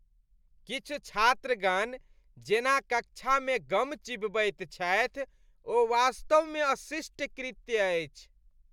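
No technical faults can be heard anywhere in this recording; the signal stays continuous and stable throughout.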